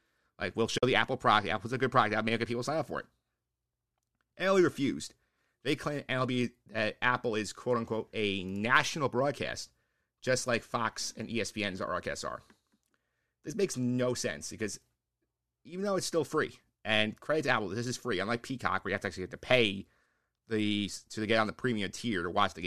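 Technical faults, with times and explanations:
0.78–0.83 s, AAC frame loss with muting: a run of audio frames went missing and the decoder replaced them with silence. The overlapping windows fade the sound out and back in, leaving a soft-edged 50 ms hole. The length fits about five of the short frames used by the low-delay AAC coding that likely carries this speech.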